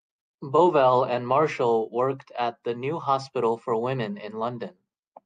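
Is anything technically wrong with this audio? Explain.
No, nothing technically wrong can be heard here.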